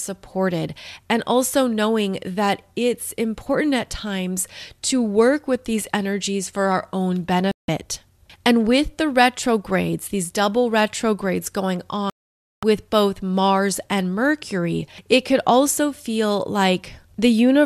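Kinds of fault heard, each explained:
Digital broadcast dropout: the receiver lost valid frames and muted this speech, leaving silent holes at 7.51–7.69 s and 12.10–12.63 s.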